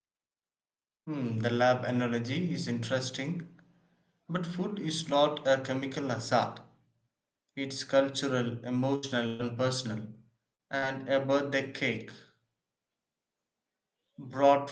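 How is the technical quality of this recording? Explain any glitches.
Four packet-loss glitches disrupt the speech, all between about 9 and 11 seconds, over a call-codec path whose audio stops near 12 kHz.

Two bursts of packet loss occur, at 8.95 to 9.06 s and 9.27 to 9.42 s. Roughly 80 ms and 120 ms of audio never arrived. The receiver extended the last sound, so each gap becomes a fading held buzz or hiss. On a spectrogram, frozen, smeared harmonics decay before speech resumes further along.

Two short concealed packet losses follow, at 10.55 to 10.61 s and 10.78 to 10.85 s, each losing about 40 ms. The decoder patched each hole from the preceding pitch or noise, then crossfaded back, giving a brief smear or wobble. The waveform shows a short, slightly too-regular stretch there.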